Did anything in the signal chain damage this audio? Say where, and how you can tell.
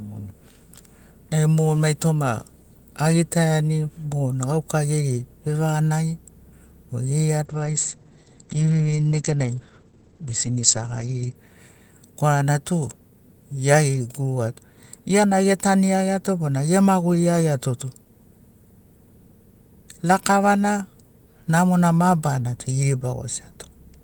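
Yes. A call bitrate drop from 7.47 s to 11.41 s: the network path's bandwidth estimate fell, and the codec was told to spend far fewer bits, in a way that fits a cut from 32 kbps to 12 kbps. The speech turns coarse and watery, and its audio bandwidth narrows from 20 kHz to 8 kHz, so the top of the sibilants and the air are lost and it sounds muffled. It stays at its worst for about 3.9 s before full quality returns.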